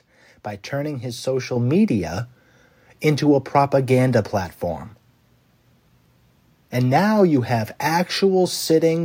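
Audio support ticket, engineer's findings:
Microphone volume stepped up at 1.56 s, right after "by turning his". Speech and room noise both jump about 6 dB in one hit, mid-phrase. Probable component: call app's auto input gain, which judged the mic too quiet and bumped the device input level in a single step rather than ramping.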